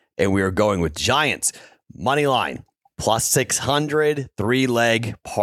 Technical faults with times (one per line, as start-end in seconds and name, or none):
3.47-3.50 corrupt frame concealed